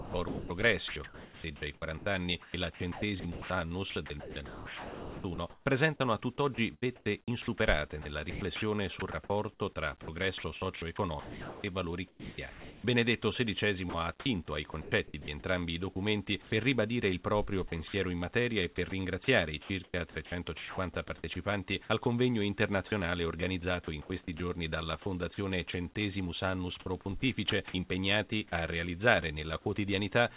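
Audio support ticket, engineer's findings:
Sound chopped by the voice detector, 0 to 29.66 s: choppy, about 6.4 s filled with comfort noise. Likely sender VAD gating; narrowband, nothing above 4 kHz.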